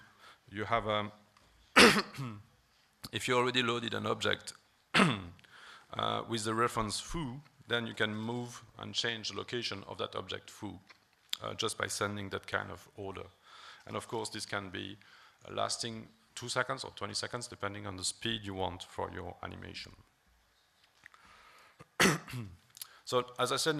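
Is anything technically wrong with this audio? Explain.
No, nothing technically wrong can be heard in this audio; the signal holds steady and continuous throughout, with no audible faults.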